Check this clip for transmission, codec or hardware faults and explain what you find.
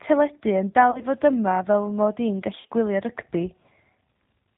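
The speech carries low-bitrate codec damage throughout and two short concealed packet-loss events.

G.729 codec, throughout: nothing above 4 kHz, and a rough, slightly synthetic texture consistent with G.729A at 8 kbit/s. The decoder rebuilds speech from a vocal-tract filter and a handful of excitation pulses per frame. This pulse-built graininess distinguishes it from a simple band-limited telephone line.

VoIP packet loss concealed by the speech codec, at 0.91–1.02 s (about 40 ms lost) and 2.61–2.72 s (about 80 ms lost, scattered over 100 ms, longest run 40 ms): the decoder repeats its last pitch and filter at falling gain. Each gap is therefore filled with a fading buzzy tone or coloured noise rather than silence or a click. The sound stays weak briefly after the gap.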